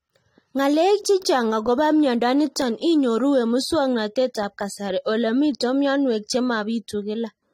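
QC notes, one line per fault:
Throughout, AAC compression: speech has plainly audible codec smearing and nothing above 16.6 kHz, likely AAC-LC at a low bitrate, around 32 kbps.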